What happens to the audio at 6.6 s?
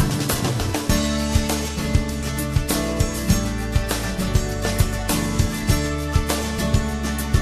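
Nothing goes wrong at 6.6 s; the audio plays through that moment intact, with no dropout, click or other fault.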